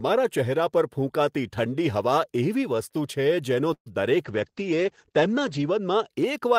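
At 3.73 to 3.88 s the speech stalls in a call audio freeze: a fading fill, then about 80 ms of silence, likely packets held up, resuming intact rather than skipping ahead. From 4.25 to 6.16 s a call bitrate drop makes speech rough and muffled, top cut from 20 kHz to 8 kHz, which points to roughly 32 falling to 12 kbps, unlike a fixed filter.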